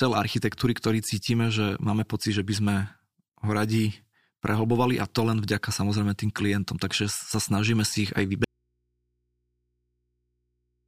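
At 8.44 s, just after "snažíme si ich aj", the speech cuts out abruptly. This is an audio dropout to a faint residue. The signal does not fade or pause. It simply stops, and it never returns before the end. What fills the gap is mains hum, roughly 50 dB below the speech level. The likely cause is a broken connection upstream while the input stage stayed live. That open input then picks up hum instead of the wanted signal.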